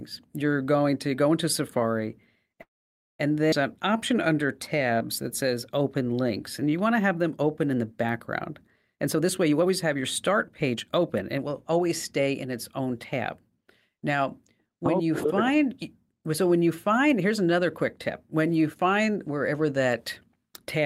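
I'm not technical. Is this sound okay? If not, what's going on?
No. At 2.61 s the speech stops for about 0.58 s, almost all of it silence, then carries on exactly where it left off. This is a call audio freeze, likely caused by delayed network packets. Unlike a skip, nothing is lost; the sound simply waits.

Right after, from 3.51 to 3.54 s, comes a skip ahead: roughly a third of a second of speech is missing, and the two sides are joined almost seamlessly. Unlike the freeze, there's no pause, just a sudden jump forward.

From 3.72 to 7.16 s, ending just before "them open in the", there's a jitter buffer slow-down. The speech plays at 92% speed, stretched by 0.28 s in total, with the pitch unchanged. It's a gradual drag, not a single stop.

From 8.95 to 12.94 s, just after "open in the background", a jitter buffer speed-up runs the speech at 114% speed, trimming roughly half a second. The pitch stays normal, so it sounds hurried rather than squeaky. 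It's the reverse of the earlier slow-down.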